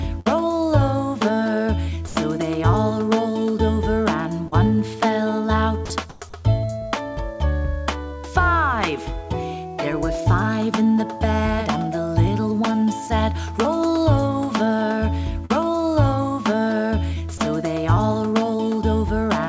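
The clip is audio carried over a call path whose codec appears to be G.722 at 64 kbps, with no content above 8 kHz. It contains four kinds of network and transmission fault. A burst of packet loss at 0.20 to 0.28 s meant that about 60 ms of audio never arrived in time. The receiver filled roughly 58 ms by stretching the last sound it had and fading it down, so a held, decaying tail replaces the real audio. The sound then resumes further along with that stretch missing. Sound dropped by the voice detector occurs at 2.08 to 2.16 s (80 ms), 5.86 to 5.90 s (40 ms) and 17.38 to 17.40 s (20 ms). The likely cause is that the sender's detector judged real sound to be background and stopped transmitting. In each case the sound gives way to synthetic comfort noise and returns only when the detector triggers again, so that much audio is lost. Short concealed packet loss appears at 4.48 to 4.54 s and 15.45 to 15.52 s, each about 40 ms, and at 6.42 to 6.45 s, about 20 ms. 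The decoder lacked those packets and extrapolated from the preceding sound before blending back, which is heard as a brief smear or wobble in which a short event can disappear. Comfort noise in place of the background fills 6.10 to 6.22 s, 120 ms. This is likely discontinuous transmission during a pause. The real background, which sits about 28 dB below the loudest parts, is swapped for a smoother generated noise whose level differs by about 2 dB.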